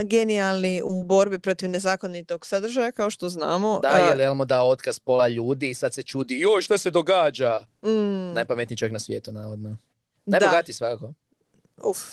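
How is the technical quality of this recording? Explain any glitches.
Three brief glitches from short concealed packet loss break up the speech, heard over a call path whose band stops near 12 kHz, consistent with Opus at around 20 kbps. They fall at 0.87–0.91 s, just before "borbi protiv nezakonitog sadržaja"; at 5.17–5.22 s, between "dao otkaz" and "ljudi i sad se"; and at 7.55–7.59 s. In each case roughly 20 ms of audio arrived too late. The receiver extended the preceding sound to fill the gap and then crossfaded back into the real audio. This produces a short smear or wobble.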